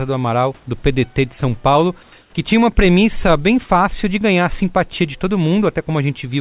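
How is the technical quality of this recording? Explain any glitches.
Two short stretches of background between phrases are replaced by artificial noise. The whole clip comes through a call path with nothing above 4 kHz, consistent with G.711 A-law telephony.

Comfort noise in place of the background occurs at 2.03–2.12 s and 2.21–2.33 s, just before "que tinha uma premissa". The room's natural background noise turns smooth and featureless, about 4 dB and then about 1 dB quieter. The likely cause is that the sender paused transmission and the receiver synthesised filler noise. Unlike a dropout, nothing goes silent or repeats.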